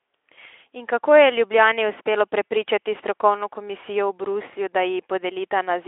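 Nothing in the speech stood out as a technical fault on listening.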